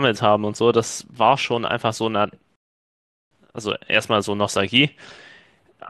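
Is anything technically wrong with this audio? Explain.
Yes. At 2.56 s the speech halts in a rebuffering stall and stays silent until 3.31 s, adding about 0.76 s to the running time. The player exhausted its store of downloaded audio and paused playback until more data arrived. When the sound returns it picks up exactly where it broke off, so no material is skipped or repeated. What you hear is a clean gap of dead air inserted into the speech.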